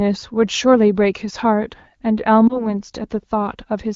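At 2.48 to 2.72 s the speech briefly dips, the sign of lost AMR speech frames. Radio errors left a frame unusable, so the decoder bridged it by repeating the previous pitch and vocal tract settings at reduced gain, then eased back over the following frames. The single short disturbance fits one lost 20 ms frame. Unlike a longer run of lost frames, it does not fall to near silence, just a brief dip. The AMR wideband (HD Voice) codec stays light at this rate.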